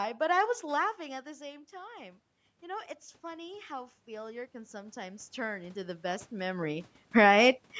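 A speech recording with two automatic gain faults. From 0.97 s to 7.68 s the automatic gain rises. The talker moves away around half a second in, and the input drops by about 16 dB. The gain control responds slowly, adding about 10 dB. Voice and room noise swell up together over several seconds. The automatic gain then falls between 7.03 s and 7.34 s. Another change in the talker's distance around 6 s probably makes the input too loud for the raised gain. The control pulls back about 5 dB, so the level is loud first and then sinks along with its background. The call's microphone processing leaves nothing above 8 kHz.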